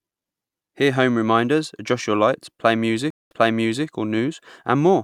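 At 3.10 s a stream reconnect breaks the speech: about 205 ms of silence follows a dropped connection, then a fresh decoder resumes playback 0.55 s earlier in the stream. A stretch already heard repeats, fading in, until about 3.86 s.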